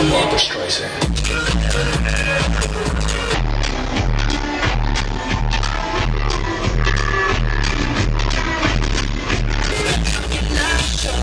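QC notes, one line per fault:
3.34–9.72 s, wrong sample rate: the audio slows and drops in pitch together, running at 0.689 times normal speed and sitting about 6.45 semitones low. Speed and pitch move by the same ratio, so the samples are being played back slower than they were captured, with no resampling. The ratio fits material recorded at 32 kHz being clocked out at 22 kHz. Everything in the span sounds sluggish and darker, then snaps back to normal at the end.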